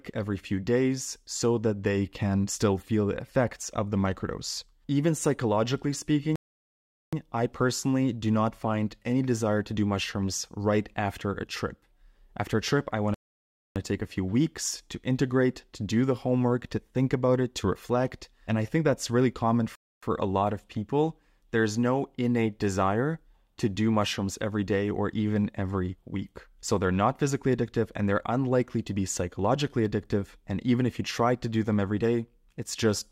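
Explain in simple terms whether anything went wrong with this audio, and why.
Yes, something went wrong: three rebuffering stalls, where playback ran dry and paused. The speech goes silent at 6.36 s for 0.77 s before "I personally do not", at 13.14 s for 0.62 s after "trip I want", and at 19.75 s for 0.27 s between "think that's really common" and "a lot of people". Each time it picks up exactly where it stopped, so nothing's missing, just delayed.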